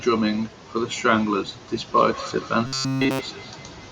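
Speech, with a feedback echo between two devices from 1.78 s to the end: each phrase returns at a steady interval of about a fifth of a second, peaking about 16 dB below the speech. The distinct, evenly spaced repeats, rather than a smooth reverberant tail, show that a second device's playback is being picked up by a microphone whose echo canceller cannot remove it. From 2.67 to 3.21 s the speech becomes a rigid metallic buzz near 133 Hz. This is robotic sound from repeated short buffers, likely from a slice of roughly 7.5 ms replayed over essentially the whole stretch. Unlike the echo, it imposes a fixed pitch instead of delayed copies.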